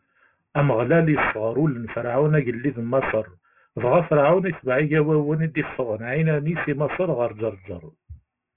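Throughout the speech, aliasing: the sample rate was lowered without an anti-aliasing filter, which fits a drop from 44.1 kHz to 6 kHz. Energy above 3 kHz folds back below it as false, unrelated tones, roughly 15 dB under the speech, making sibilants gritty and metallic.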